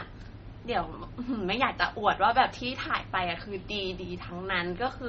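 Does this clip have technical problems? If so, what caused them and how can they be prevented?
Yes. Throughout the speech there's heavy MP3 compression damage, likely from encoding at a very low bitrate, something like 32 kbps. Nothing survives above 8 kHz, so it sounds dull, and starved frequency lines flicker between frames, giving that watery, swirly texture with smeared consonant attacks. To prevent it, keep a lossless master and, if MP3 is needed, encode at a much higher bitrate.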